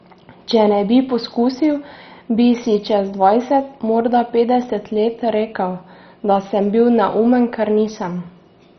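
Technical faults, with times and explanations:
Throughout, MP2 compression: dull speech with nothing above 6.1 kHz and a gurgling grain, likely heavy Layer II coding near 32 kbps switching off upper sub-bands.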